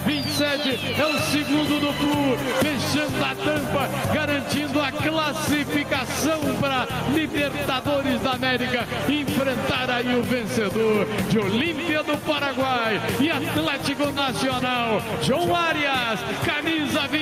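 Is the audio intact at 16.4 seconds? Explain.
No, gain pumping runs through the whole clip: the gain swings by around 5 dB as it is pulled down on loud sounds, likely from overdriven gain hitting a fast limiter, unlike a gate's hard cut to silence.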